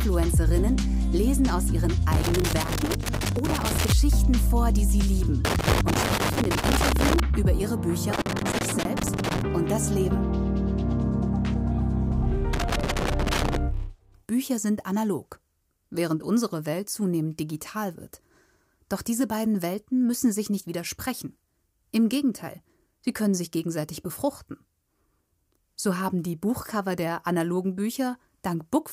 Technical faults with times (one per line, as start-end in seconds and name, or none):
2.12-3.92 loose connector crackle
5.45-7.20 loose connector crackle
8.13-9.41 loose connector crackle
12.53-13.56 loose connector crackle